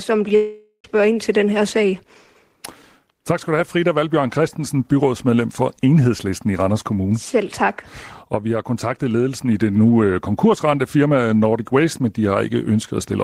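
A speech clip with what sounds like a long network dropout: the stream most likely stopped delivering audio from 0.35 to 0.85 s, and about half a second of sound never arrived. The receiver smeared the last sound into a fading buzz for nearly all of that gap, followed by a brief silence of about 60 ms, before speech resumes with "ind til den her", the lost portion simply gone.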